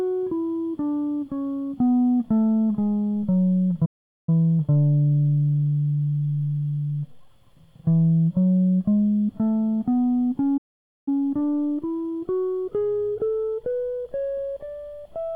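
Playback stall at 3.85 s: the music cuts to silence for about 0.42 s before resuming where it stopped, most likely because the player ran out of buffered data or its output thread was briefly blocked. Time-compressed catch-up follows from 4.29 to 7.29 s, as the player trims its backlog by cutting and cross-fading small slices, so the music runs about 1.1 times fast at unchanged pitch. A second playback stall hits at 10.57 s, silencing the music for about 0.49 s, likely from the same starvation or blocking. Another time-compressed catch-up runs from 11.08 to 14.08 s, again hurried to 1.1 times speed.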